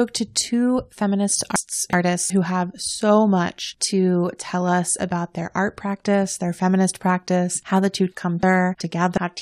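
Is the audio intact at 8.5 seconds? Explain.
No. Just after "how the two come", 8.43 to 9.18 s flutters: frames out of order, two adjacent 0.37 s blocks played swapped.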